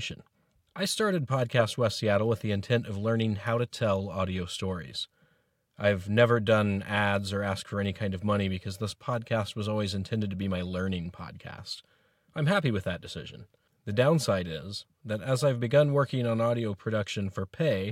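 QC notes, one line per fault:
No faults heard.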